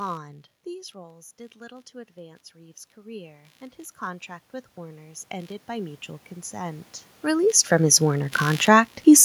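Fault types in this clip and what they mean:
computer activity noise: Processor or graphics load shifts the audio ground, producing a buzz pulsing around 70 times per second, roughly 30 dB below the speech throughout.
automatic gain rising: After the input fell by about 14 dB, the gain control climbed about 20 dB from 0.64 to 6.93 s, swelling speech and background together.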